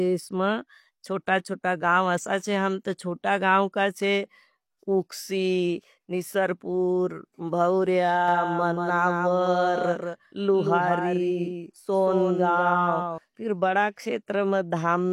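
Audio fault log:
8.28 to 13.18 s, doubled audio track: a full-band copy of the speech trails about 200 ms behind, roughly 5 dB quieter, with no decay or room colour, starting and stopping abruptly. The likely cause is a slower second capture path or an edit holding two offset copies.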